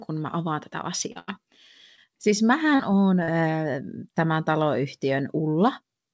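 Right after "mä avaan tätä", at 1.12 to 1.17 s, comes a short concealed packet loss: about 40 ms of audio never arrived, and the receiver bridged the hole by extending the preceding sound before blending back. It is heard as a brief smear. On a spectrogram the preceding sound runs on unnaturally steady for a few frames, and the waveform shows that sound continued and slightly smoothed where detail should be. The same fault recurs at 1.95 to 1.99, 2.75 to 2.81 and 3.23 to 3.30 s, each a short wobble.

Almost immediately after the first gap, from 1.19 to 1.29 s, a burst of packet loss removes about 80 ms in one run. The receiver held the last sound and let it decay, so the ear hears that sound held and fading, and the speech then resumes further on with the intervening part gone. The waveform shows the held sound shrinking in amplitude, and the spectrogram shows a stretch of frozen, dimming energy before an abrupt jump. 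The call codec path cuts everything off at 8 kHz, consistent with G.722 at 64 kbps.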